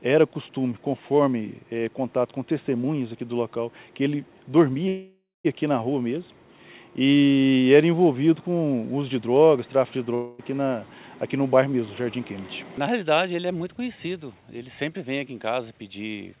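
At 4.88 s, a call audio freeze interrupts the narrowband call sound, which has nothing above 4 kHz. The last sound continues as a fading buzz, then about 0.2 s of silence. Packets were likely held up, emptying the jitter buffer. At 5.47 s the sound resumes where it stopped. Nothing is lost, but everything after now runs 0.57 s late.

At 10.15 s, a long network dropout begins. A fading buzz fills about 0.24 s and never quite reaches silence. Audio was likely lost in transit. At 10.41 s the sound returns further on. About 0.24 s is missing.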